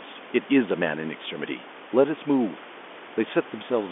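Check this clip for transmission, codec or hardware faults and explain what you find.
No transmission, codec or hardware fault can be heard in the speech. The sound has the narrow telephone band of G.711 coding, roughly 250 Hz to 3.5 kHz, with room noise sitting about 20 dB below the speech.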